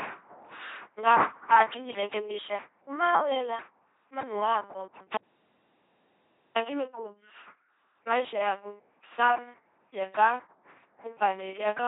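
From the first second to the last, the speech carries the sound of an LPC-10 vocoder, heavily damaged and with nothing above 3.8 kHz, which fits a 2.4 kbit/s LPC-10 coder. Instead of the real voice, a pulse train or a noise source drives a simple all-pole vocal tract filter, with each frame forced to be either voiced or unvoiced. The result is a buzzing, mechanical robot voice, with stray buzz or hiss wherever that voicing choice goes wrong.

Right after "wela manu wako", at 5.18 s, there is an audio dropout to silence lasting until 6.56 s, about 1.39 s in all. The signal stops mid-flow and the gap is silent, with no room tone or vocoder buzz underneath, before the speech resumes. This is likely due to the input being lost while the recorder kept writing silence, so whatever was said in that stretch is gone.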